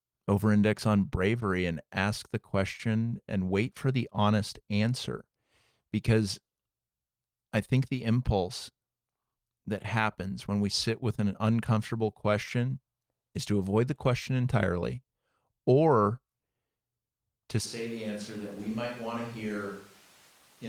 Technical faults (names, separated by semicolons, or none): switch to a distant microphone